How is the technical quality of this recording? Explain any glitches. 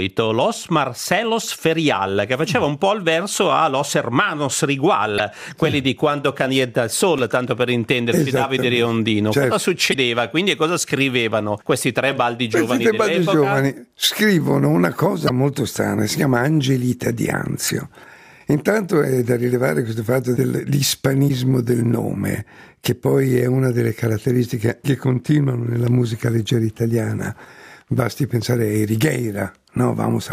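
The recording has five brief glitches, all from damaged data in a compressed stream. Short chirps, squawks, clicks or holes break into the sound at 5.15–5.20 s, 9.90–9.95 s, 15.25–15.30 s, 17.65–17.71 s and 21.25–21.30 s, each lasting about 50 ms. Corrupted bytes in the encoded file make the decoder misread those frames and lose sync. It outputs garbled audio until it finds the next valid frame header and resumes normal decoding.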